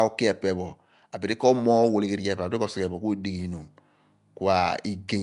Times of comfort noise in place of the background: none

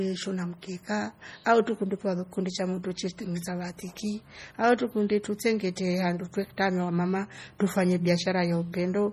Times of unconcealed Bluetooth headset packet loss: none

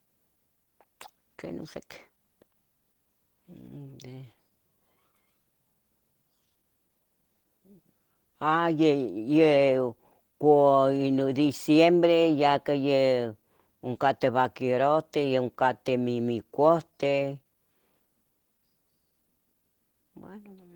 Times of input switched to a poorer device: none

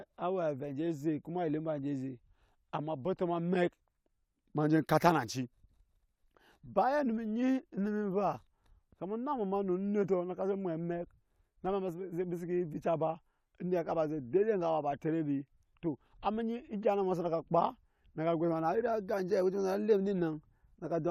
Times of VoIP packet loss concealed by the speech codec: none

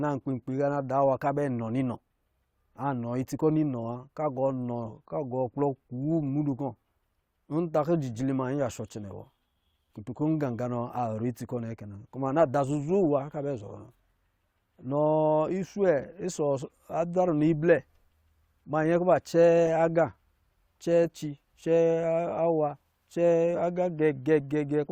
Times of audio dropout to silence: none

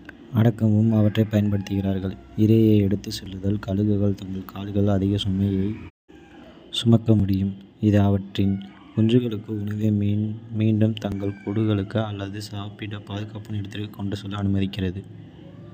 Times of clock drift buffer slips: 3.26-15.06

